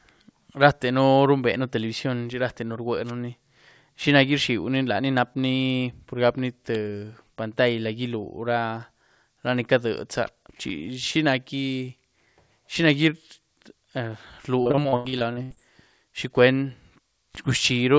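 From 14.62 to 15.58 s the speech breaks up with repeated packet loss (robotic sound): about a dozen short holes, the longest near 82 ms, each patched by stretching the preceding sound, so nearly half the stretch is concealed. That gives the rapid chop that sets it apart from a single clean dropout.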